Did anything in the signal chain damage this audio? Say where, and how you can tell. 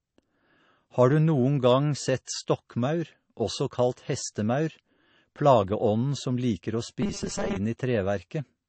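Yes, at the codec stage. The whole speech clip has nothing above about 8.3 kHz, and it carries two different kinds of compression damage at once. The artefacts of both codecs are heard together. This fits a low-rate MP3, around 32 kbit/s, re-encoded to AAC-LC at about 48 kbit/s. This is likely transcoding between lossy codecs. The second encoder spent its bits preserving the first encoder's artefacts, and the lowest cut-off in the chain survived.

There is a second fault at the driver or buffer stage, from 7.02 to 7.57 s. The speech turns into a rigid, metallic buzz with a fixed pitch of 200 Hz. It still roughly follows the syllables. A 200 Hz repeat rate means a 5 ms chunk being looped. Most of that stretch is repeated material, and the real audio underneath is skipped. This is likely robotic sound from repeated short buffers. New data arrived too seldom, so playback kept replaying the last block.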